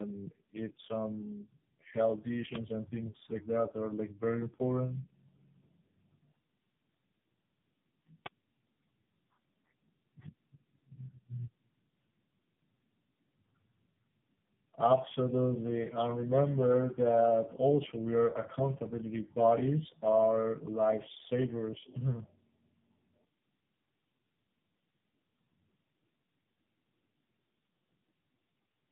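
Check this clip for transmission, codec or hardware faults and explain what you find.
One fault runs through the whole clip: tandem speech coding. The speech sounds like three low-rate speech codecs in a row. Each re-encodes the previous one's damaged output. Errors stack up, making the speech rough, muffled and warbly, with nothing above 3.7 kHz.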